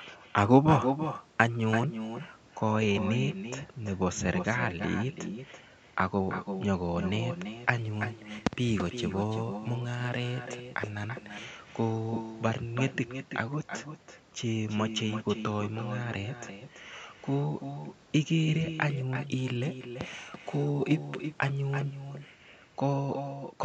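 Echo with no canceller runs through the whole speech recording: a thinner copy trails each phrase by roughly a third of a second at about 8 dB down, as if the far end's loudspeaker leaked back into its microphone unremoved. A Bluetooth SBC bit pool drop occurs at 0.39–2.37 s, 7.78–11.45 s and 18.87–22.33 s, where the treble dulls and gritty noise rises, which fits the encoder starving its upper sub-bands near 94 kbps.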